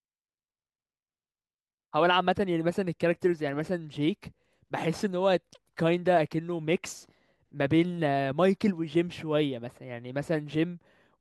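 A speech recording, and nothing is technically wrong with it.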